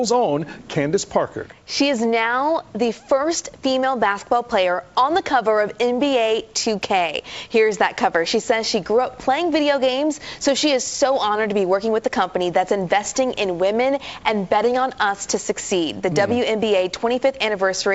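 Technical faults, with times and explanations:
No technical faults can be heard, so there are no times or explanations to give.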